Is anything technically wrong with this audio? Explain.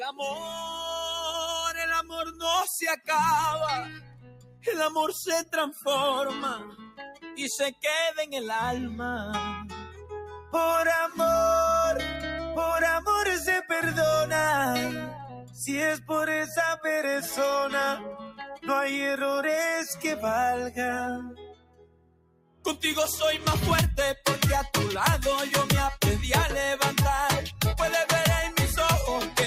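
Yes. A speech noise suppressor has been left running on this sound the whole way through, and it keeps mistaking sustained material and tails for noise, so levels swing by something like 10 dB as it grabs and releases.

Because the suppressor applied to this sound treats steady, held and decaying parts as background, it pulls them down while attacks slip past. The result pumps and thins out, with tails getting chopped rather than fading naturally.

You can hear the sound cut by the noise suppressor most clearly at 0.12–0.89 s (about 10 dB down), 2.02–2.45 s (about 11 dB), 3.86–4.67 s (about 13 dB), 6.69–7.39 s (about 16 dB), 15.34–15.59 s (about 8 dB) and 21.29–22.66 s (about 18 dB). That last one is the worst, with well over a second sinking away.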